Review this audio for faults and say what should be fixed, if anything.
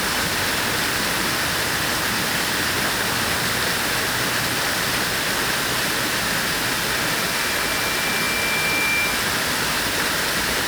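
Grainy distortion runs through the whole clip and changes with the sound. Quiet passages turn rough. The noise sits only about 15 dB below the signal. The likely cause is low bit depth without dither, fitting roughly 4 bits rounded coarsely. Keep a full bit depth, and dither any reduction.

A loudspeaker feedback squeal starts at 6.65 s and lasts until 9.46 s. It is a single tone at 2.4 kHz. It swells over about two seconds until it is roughly as loud as the sound itself. A microphone is hearing its own loudspeaker, and the loop gain tops one at that pitch. Lower the gain or move the microphone away from the speaker.

A Bluetooth stutter falls between 8.24 and 8.26 s, inside the squeal. A slice of about 20 ms repeats. This points to a single lost packet. The receiver replayed its last buffer, then resumed as if the audio had kept playing. Shorten the wireless link or clear interference on it.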